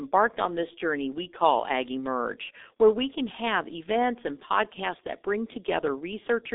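Throughout, the speech has passed through a G.723.1 codec at a very low rate, consistent with about 6 kbit/s, over a line limited to 250 Hz to 3.7 kHz. Nothing survives above 3.8 kHz, so the voice is heavily muffled and rasping, with smeared consonants.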